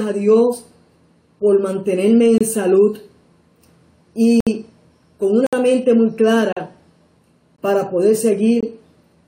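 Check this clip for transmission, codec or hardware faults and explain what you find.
Six gaps between stream segments break the audio. Consecutive segments' timestamps leave a small hole that the player fills with silence, and the timing suggests 1.0-second segments. Hard-edged dropouts fall at 2.38–2.41 s (27 ms), 4.40–4.47 s (63 ms), 5.47–5.53 s (61 ms), 6.53–6.57 s (40 ms), 7.56–7.58 s (20 ms) and 8.61–8.63 s (22 ms). From 4.4 s on they recur about once a second. Nothing is lost: the sound simply stops and resumes.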